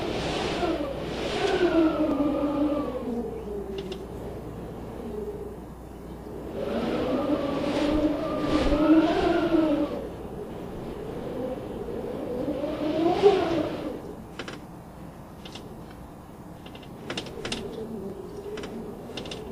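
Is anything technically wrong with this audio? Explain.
Yes. Three brief skips at 2.11, 16.1 and 18.1 s come from overlap between stream segments. Timestamps on adjacent 2-second segments overlapped, so 7 to 17 milliseconds of sound were discarded at the joins and the waveform jumps, giving a tiny skip. No silent gap appears, which sets it apart from a dropout.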